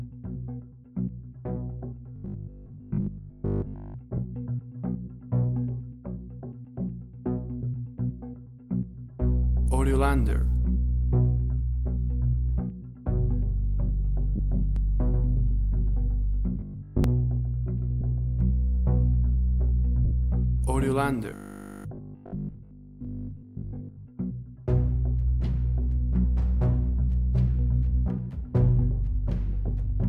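From 2.16 to 3.96 s the sound turns into a rigid, metallic buzz pitched at 50 Hz, robotic sound from repeated short buffers. This is likely caused by audio arriving too seldom, so a 20 ms stretch is looped while most of the real audio is skipped. The fixed buzz pitch distinguishes it from a codec smear. The same buzz returns from 16.60 to 17.04 s and from 21.31 to 24.09 s.

Lost LE Audio frames appear at 4.17 s (10 ms), 14.36 to 14.39 s (30 ms), 18.01 s (10 ms), 20.05 to 20.12 s (60 ms) and 29.68 s (10 ms). The decoder replays the last spectrum with scrambled phase, so each loss is a brief noisy smear with no pitched buzz. The 60 ms gap fades toward silence.

From 14.76 to 18.40 s a doubled audio track, likely from a second capture path, adds a copy about 5 dB quieter and roughly 150 ms late. The copy is dry and starts and stops abruptly, unlike a room echo.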